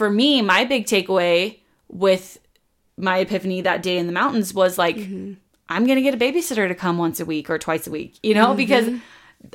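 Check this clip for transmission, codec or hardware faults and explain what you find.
There is one fault: CD scratch ticks. They occur from 4.36 to 4.66 s, just after "that day in the". Three short ticks sit on the speech there. Each is brief, the longest under a millisecond. A scratch or blemish on the disc wiped out more data than error correction could restore. It passed under the laser on successive turns. Each time, the player patched or muted the damaged samples, leaving a regular, tiny click.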